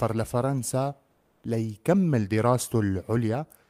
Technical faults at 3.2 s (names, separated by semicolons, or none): none